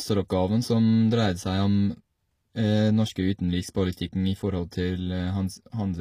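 Throughout the speech, the encoding was most likely HE-AAC compression at a low bitrate, consistent with roughly 24 kbps. Only the lower spectrum carries real detail; the upper range is rebuilt by spectral band replication, copying lower bands upward under a coarse envelope, with nothing above 15.5 kHz. The damage is plainly audible: the treble is mismatched to the harmonics below, so s sounds come out gritty, metallic or lispy.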